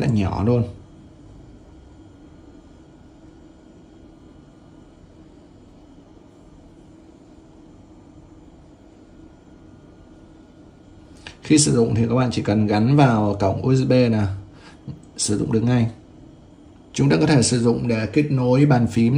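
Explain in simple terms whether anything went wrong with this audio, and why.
Nothing went wrong here; there's no glitch or technical problem anywhere in the recording, so there's nothing to explain.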